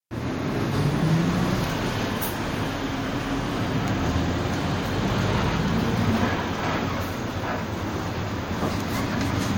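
Transcoding between lossy codecs runs through the whole clip. Nothing is present above 16.6 kHz, and two layers of coding damage are heard at once, the artefacts of one codec overlaid with those of another. That mix likely comes from an MP3 encode at around 64 kbit/s re-encoded to Vorbis at around 61 kbit/s, the second codec wasting bits reproducing the first one's artefacts while adding its own.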